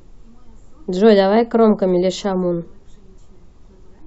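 Speech recording, with no technical faults heard anywhere in the clip. There is nothing here that needs a time or a cause.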